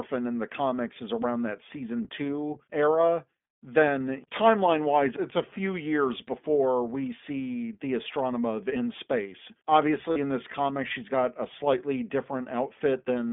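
Throughout, the speech passes through the iLBC codec, which codes each short frame on its own at a low bitrate, consistent with its 15.2 kbps mode. The line is cut to roughly 200 Hz to 3.5 kHz, so it sounds thin and muffled, with plainly audible rough, synthetic coding damage.

From 10.12 to 10.18 s, lost iLBC frames leave a gap of about 40 ms, which fits two missing 20 ms frames. The decoder fills it by repeating the last pitch cycle mixed with noise, heard as a brief held, buzzy vowel before the speech snaps back almost at once.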